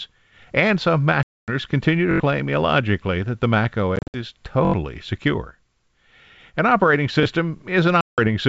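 From 1.23 to 1.50 s the speech drops into a hard-edged silent hole of 250 ms just before "continue to", then comes back slightly distorted, settling within some tens of milliseconds. This is packet loss on an ADPCM call. The missing packets were filled with silence, and because ADPCM codes each sample as a change from a prediction, the receiver's predictor and step size no longer matched the sender's. It took a moment to resynchronise.

Between 2.11 and 2.20 s, right after "continue to" and before "illogically that the", a tiny fragment rattles out as a stutter, the same slice heard five times with a hard join at each repeat. This is a repeated buffer. When fresh audio failed to arrive in time, the device replayed its last 21 ms block, which fits a 1024-sample buffer, and roughly a tenth of a second of real speech never played.

From 3.96 to 4.18 s the same ADPCM packet loss returns in scattered form: 140 ms of gaps spread over 180 ms, with the longest single hole 60 ms. 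Each restart brings a brief spell of slightly distorted speech.

The repeated-buffer stutter recurs from 4.65 to 4.74 s with the same four extra plays. It appears again from 7.23 to 7.25 s as a single extra play.

A last 170 ms ADPCM dropout falls between 8.01 and 8.19 s, with the same slightly distorted recovery. The underlying G.722 wideband coding at 64 kbit/s contributes at most a faint upper-band hiss.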